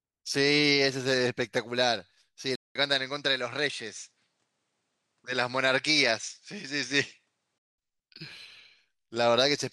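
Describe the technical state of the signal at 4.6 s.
At 4.6 s the speech is inside a stretch from 2.55 to 7.78 s where the input has likely switched to a poorer device. A 200 ms gap marks the change, nothing reaches above 10.5 kHz, and a new noise floor sits roughly 50 dB down at unchanged level.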